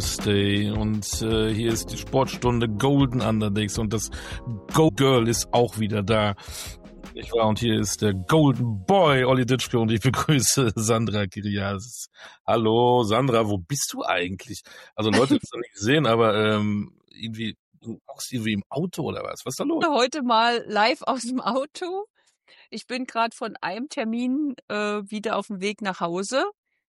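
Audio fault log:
4.87, 15.40–15.44, 19.79–19.83 and 25.98 s, damaged data in a compressed stream: each is a brief chirp, squawk, click or short hole cutting into the sound. Corrupted bytes in the compressed data made the decoder misread those frames and lose sync until it found a valid frame header.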